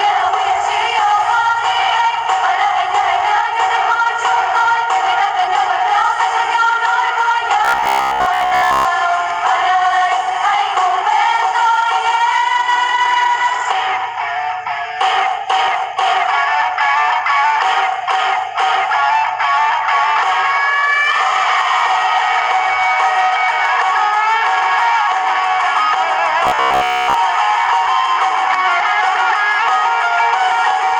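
Robotic sound from repeated short buffers appears from 7.65 to 8.85 s and again from 26.45 to 27.14 s. The audio collapses into a rigid, metallic buzz pitched near 67 Hz. This is likely a stream starving for data, with the playback looping its last fragment of about 15 ms so that most of the real signal is skipped. That loop length sets the fixed buzz pitch, while the underlying sound is followed only roughly.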